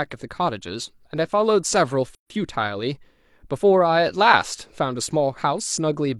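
From 2.15 to 2.30 s, a 151 ms gap at a join of encoded pieces: untrimmed encoder delay and padding silence the speech, which resumes where it stopped.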